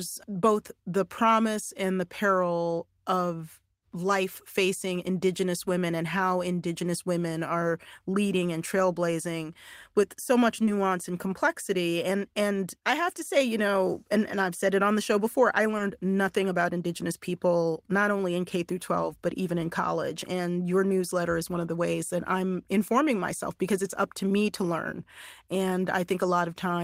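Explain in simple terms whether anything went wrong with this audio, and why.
Two short concealed packet losses can be heard, at 10.65 to 10.69 seconds and again at 15.77 to 15.81 seconds. Each time, about 20 milliseconds of the call arrived too late to be played. The receiver covered each gap by stretching the last bit of sound it had, then faded back into the real speech. You hear this as a tiny smear or blip, and a quick sound at that moment may go missing.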